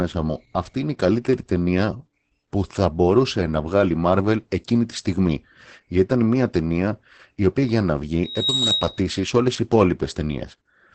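Throughout, the speech has been squeezed through Opus voice compression at a low rate, which fits about 10 kbps in its SILK linear-prediction mode. The band stops near 8.8 kHz, and the coarsely coded excitation leaves the speech muffled, hoarse and faintly robotic.

From 8.24 to 9.14 s, right after "η οποία για να" and ending before "σε όλε τι", a microphone picks up its own loudspeaker and the loop runs away as a loudspeaker feedback squeal. A 3.8 kHz tone swells within about a third of a second to roughly 5 dB above the speech.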